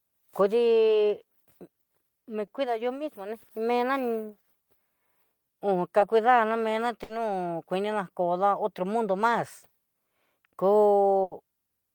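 Short concealed packet loss occurs at 1.21, 2.45, 5.99 and 10.41 s. Each time, about 20 ms of speech failed to arrive, and the receiver bridged it by extending the preceding sound before blending back in, leaving a brief smear or wobble.

A burst of packet loss hits at 7.03 to 7.11 s and again at 11.23 to 11.33 s, dropping 60 ms and then 80 ms. The decoder prolonged the last sound as a fading buzz or hiss, and speech resumes with that stretch missing.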